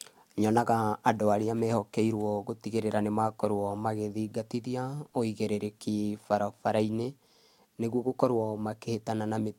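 No technical faults can be heard anywhere in the recording, and the signal holds steady throughout.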